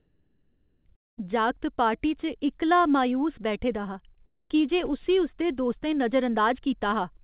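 From 0.00 to 0.85 s the background is a steady, featureless hiss sitting about 39 dB below the loudest speech, at roughly the same level as the real background. This is likely comfort noise in place of the background: the sender stopped transmitting during the pause, and the receiver synthesised smoothed noise instead. On a spectrogram it appears as a uniform, textureless wash, cut off at 4 kHz like everything else on this narrowband 64 kbps G.711 mu-law path.

At 0.96 s a long network dropout likely begins. The last sound is stretched into a short fading buzz, then about 0.21 s of near silence follows until 1.19 s. About 220 ms of audio never arrives, and speech resumes with that portion gone. On the waveform this shows as a brief decaying tail and then an almost flat line. The spectrogram shows a blank vertical gap with a smeared edge.

Between 4.14 and 4.18 s, short concealed packet loss replaces about 20 ms with roughly 17 ms of extrapolated sound. 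It is heard as a tiny smear or wobble. On a spectrogram it appears as a thin column where the fine detail briefly blurs before the real signal resumes.

From 4.26 to 4.50 s, comfort noise likely stands in for the background again. This time it is about 10 dB quieter than the real background, so it sounds like a sudden drop into a flat, dull hush. On a spectrogram it appears as a darker, even band between the two stretches of real background.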